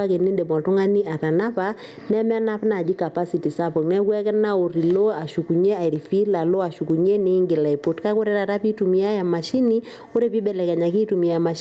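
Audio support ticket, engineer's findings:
Gain pumping, whole clip. Level swings by around 10 dB. Likely input gain way too hot, with a fast limiter or compressor clamping down on every peak. Speech sounds squashed. Top end stops at 8 kHz, which fits the Opus call path.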